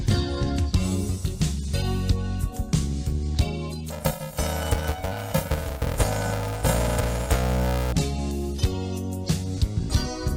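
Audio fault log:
3.90–7.93 s planar audio read as interleaved. Each 2.67 ms block holds all of one channel, then the other, but is read as alternating pairs. That fits a 128-sample block. Blocks this short produce a robotic buzz at 375 Hz, with no clear octave shift.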